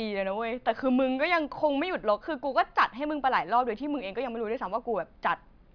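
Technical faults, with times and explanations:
No technical faults are audible.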